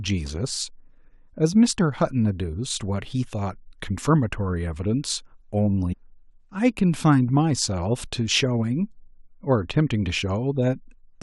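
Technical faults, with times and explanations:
At 5.92 s, a stream segment skipped: the speech jumps ahead abruptly, with a tiny blip right at the join, and a chunk of what was being said just isn't there, so the speech lurches forward. The likely cause is a segmented stream where one segment failed to load, and the player simply moved on to the next one, splicing the two sides together without the missing second or so in between.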